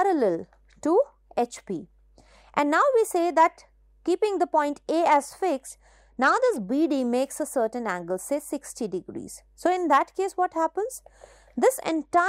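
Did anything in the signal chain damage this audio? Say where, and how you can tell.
Yes, at the codec stage on the Bluetooth link: a Bluetooth SBC bit pool drop from 5.67 to 6.67 s, and again from 11.86 s to the end. Both stretches turn dull and gritty, which fits the bit pool falling from 28 to about 11, near 90 kbps. Starved of bits, the top sub-bands go empty and the rest are coarsely quantised. A spectrogram shows the upper band abruptly cut away above grainy noise, while the waveform barely changes.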